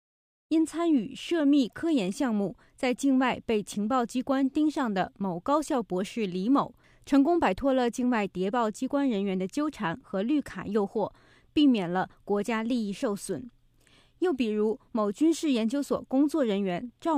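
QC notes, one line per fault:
No faults found; nothing to flag.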